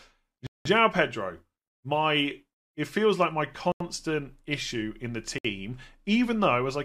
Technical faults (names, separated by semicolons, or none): Bluetooth stall